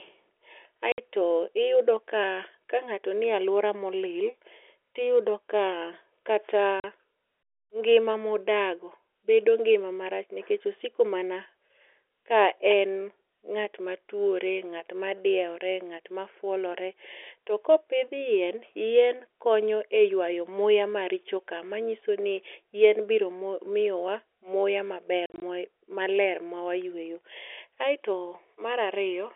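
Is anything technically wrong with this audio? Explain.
Yes. Packet loss filled with silence: dropped packets were replaced by digital silence, punching hard-edged holes into this telephone-band speech at 0.92–0.98 s (60 ms) and 6.80–6.84 s (40 ms). Between 25.26 and 25.42 s there are scattered gaps totalling 100 ms, the longest 40 ms, which fits 20 ms packets.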